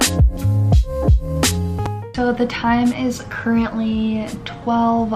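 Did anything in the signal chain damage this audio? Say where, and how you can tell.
Yes: a loud pop from 1.86 to 1.88 s stands about 10 dB above the sound, a vertical full-band spectrogram stripe and waveform spike, likely an analogue-side voltage step.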